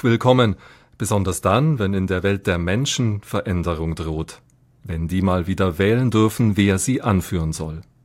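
No technical faults occur at any point in the recording, so there are none to describe in time order.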